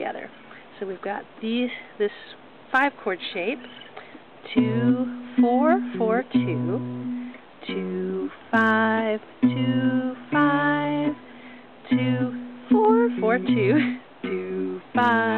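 No technical fault can be heard anywhere in this audio. Nothing in it calls for a timestamp or a cause.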